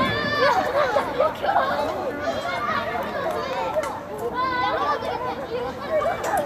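No technical faults can be heard anywhere in this sound recording.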